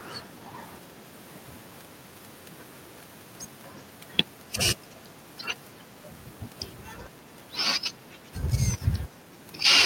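Speech, with two brief bursts of echo leak. A faint, delayed copy of the voice returns from 4.91 to 4.95 s, very low, around 40 dB under the speech. A louder scrap, around 30 dB down, follows from 8.03 to 8.31 s. The copies lag by 362 ms and 375 ms. The likely cause is a far-end loudspeaker whose echo canceller let some of its microphone pickup through and sent it back.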